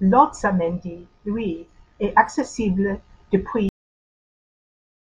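Speech with a cut-off end: at 3.69 s the audio stops mid-sound, the final buffers never played, leaving flat digital silence, a waveform ending abruptly without decay and a spectrogram going blank.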